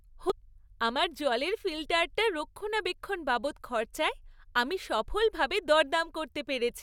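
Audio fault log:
0.30–0.32 s, damaged data in a compressed stream: a brief glitch lasting about 20 ms, just before "আমার জলের ফিল্টারটার রক্ষণাবেক্ষণ". Corrupted bytes reached the decoder, which misread the affected frame and then lost sync until it found the next valid frame header. A plain dropout would be silent and a simple click would be a single sharp impulse.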